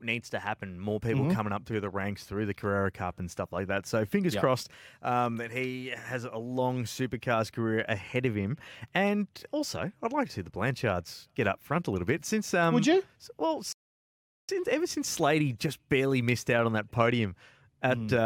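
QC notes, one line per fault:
13.73–14.49 s, rebuffering stall: the player drained its store of downloaded audio and had to halt playback until the next data arrived from the network. In the speech this shows up as an abrupt drop to silence lasting about 0.76 s, after which the audio picks up at exactly the point where it broke off. No material is skipped or repeated; the gap simply stretches the clip's timing by that pause.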